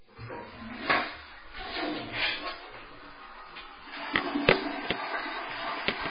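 Throughout, the sound is dull and watery, with swirling, metallic chirps and smeared attacks, likely from heavy MP3 compression at a bitrate near 16 kbps. A spectrogram shows nothing above 5 kHz, and patches of energy below it flicker on and off between frames.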